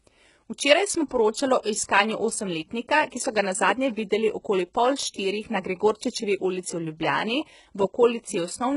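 From the start, the speech has a synthetic treble: s sounds come out gritty and lispy with a metallic edge, and nothing reaches above 11.1 kHz. The likely cause is heavy HE-AAC compression, which fits a bitrate around 12 kbps. Only the lower spectrum is truly coded, and the upper bands are copied up from below, so their harmonics fail to align.

From 1.63 to 1.65 s, between "smo poročali" and "iskanju osemletnika ki so", a brief hiss runs ahead of an attack, which lands softened and smeared. This is pre-echo: quantisation noise sized for the loud onset spreads across its block, filling about 25 ms of quiet before it.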